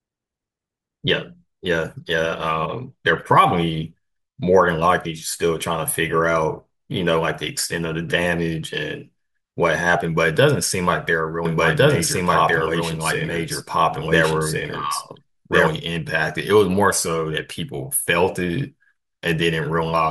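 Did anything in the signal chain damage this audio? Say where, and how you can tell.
Yes. A doubled audio track runs from 11.45 to 15.67 s. A second full-band copy of the speech trails the original by about one and a half seconds, at roughly equal level. It is dry and starts and stops abruptly, likely from a second, slower capture path or an editing overlap.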